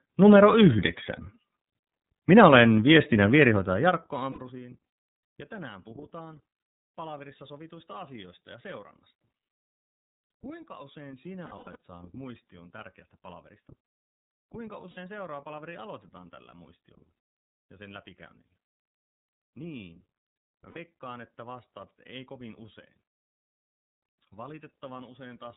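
The speech runs through the iLBC codec for the whole clip, its 30 ms frames fitting the 13.33 kbps mode. Nothing above 4 kHz survives, so the sound is narrowband and plainly rough and synthetic in texture.

Lost iLBC frames occur at 4.32 s, 14.91 s and 20.70 s, each gap about 60 ms. A longer patch from 11.45 to 11.76 s loses about 210 ms in scattered pieces, the longest about a tenth of a second. The decoder repeats the last pitch cycle mixed with noise, leaving a brief held, buzzy vowel before the voice returns almost at once.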